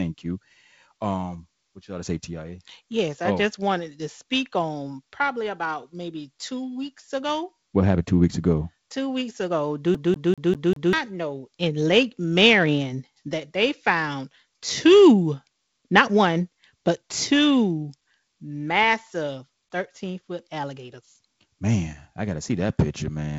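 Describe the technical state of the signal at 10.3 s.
CD stuck on one turn, from 9.95 to 10.93 s: a scratch knocks the laser back one track at the same point each revolution, so a 197 ms slice of speech repeats five times, with a brief mute at every jump, giving a rapid, even stutter.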